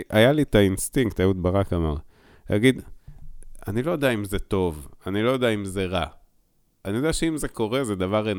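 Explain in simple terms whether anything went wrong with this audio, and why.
Nothing in this speech recording stood out as having gone wrong when listening to it.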